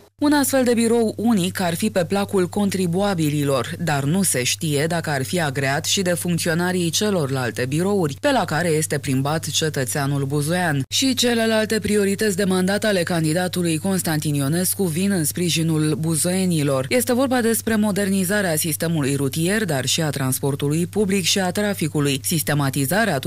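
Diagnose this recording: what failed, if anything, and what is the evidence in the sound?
Hard clipping runs through the whole recording. Somewhere upstream, likely at the converter or a gain stage feeding it, the level went about 3 dB past what it could pass, so the loudest peaks get sliced flat. Only a small fraction of samples, under one percent, actually hit the ceiling. That's why you hear brief crackle riding on the peaks rather than a constant fuzz. The squared-off tops throw extra harmonics high up the spectrum.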